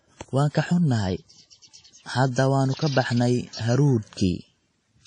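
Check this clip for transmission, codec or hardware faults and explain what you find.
Two codec faults are audible in this speech clip: a lossy coding sound across its whole length, and one pre-echo.

Throughout, the speech sounds washy and ringing, with a hiss that swells and fades with the sound and no content above 10 kHz. This is likely WMA compression at a low bitrate, consistent with about 32 kbps. Long transform blocks smear the quantisation noise over time, and weak detail is discarded.

From 2.31 to 2.36 s, a short hiss of about 55 ms runs ahead of a sharp onset, and the attack itself sounds blunted. This is pre-echo. The attack falls late in a transform block, so noise sized for the loud part also fills the quiet moment before it.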